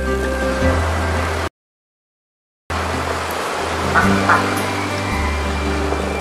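A playback stall begins at 1.48 s. The player most likely ran short of buffered data, or its output thread was held up, so it had nothing to send to the output. The sound cuts off abruptly in mid-flow and silence holds for about 1.23 s, until 2.70 s, when the audio comes back. The break is long enough to register clearly as a halt rather than a brief dropout or click.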